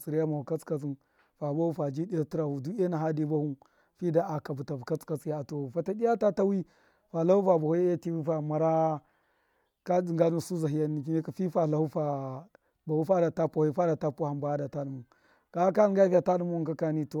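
No technical faults can be heard anywhere in the recording; the speech signal stays steady and intact throughout.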